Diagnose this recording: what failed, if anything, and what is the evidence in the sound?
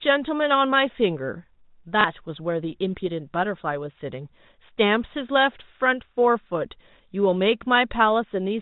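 At the network stage, packet loss with last packet repeated hits the speech from 2.01 to 2.04 s. For 30 ms the receiver replays the previous chunk instead of going quiet, pointing to a single lost packet. That gives a small blip rather than the hard gap of a dropout. The G.711 telephone band stays intact throughout.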